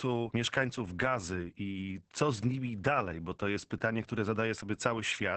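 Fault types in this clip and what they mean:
Opus voice compression: the speech runs through a linear-prediction voice coder squeezed to what sounds like about 10 kbps. The band stops near 8 kHz, and coarse excitation coding leaves voices muffled, hoarse and faintly robotic throughout, unlike a plain low-pass filter, which dulls without roughening.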